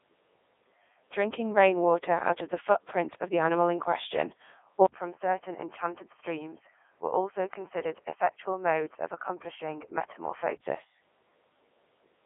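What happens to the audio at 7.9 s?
You're inside the span from 4.86 to 10.64 s where the input was likely switched to a poorer device. Right after "the animal in question" there's an 80 ms gap, then the sound drops to roughly 5 dB quieter, loses everything above 3.2 kHz, and takes on a duller, boxier tone with a faint new noise floor sitting far below the speech. That's what a cheaper mic or a headset's call profile does.

On top of that, the whole clip runs through the Codec 2 vocoder, and the damage is heavy. The decoder only gets pitch, voicing, energy and a spectral envelope, and rebuilds the speech from sine waves rather than keeping the actual waveform. That's why 7.9 s sounds robotic and buzzy, with nothing above 3.8 kHz. The sound fits Codec 2 at its top 3.2 kbit/s mode.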